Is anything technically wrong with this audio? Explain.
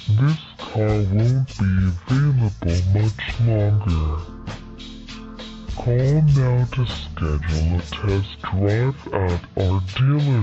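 Yes. Stereo read as mono runs throughout the clip: left and right samples, stored alternately, are being read as one continuous channel, so each stereo frame counts as two samples. Everything plays at half speed and an octave low, sounding dragged and deep.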